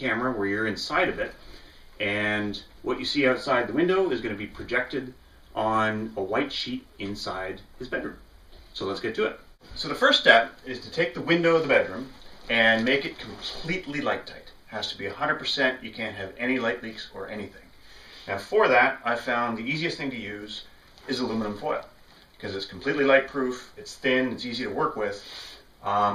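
No technical faults are audible.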